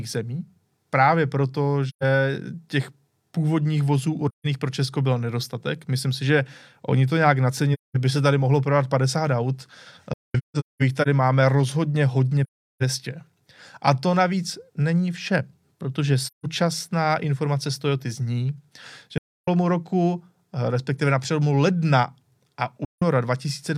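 The speech drops out in soft-edged gaps from AAC frame loss with muting at 1.88–2.03, 4.28–4.47, 7.73–7.96, a scattered patch across 10.13–11.07, 12.43–12.83, 16.24–16.46, 19.18–19.48 and 22.84–23.03 s. Missing frames are zeroed, so overlapping windows fade out and back in.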